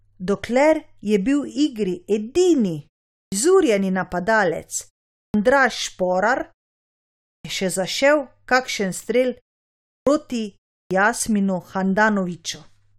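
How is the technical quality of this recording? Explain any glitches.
The recording has one recurring glitch, a clipped start after a pause, at 3.23, 5.25, 7.35, 9.97 and 10.82 s. After each silence of 0.32 to 0.9 s, the output device has dozed off and takes 87 to 97 ms to wake, so speech bursts in abruptly with its first sounds missing. The muted pauses before these moments are expected.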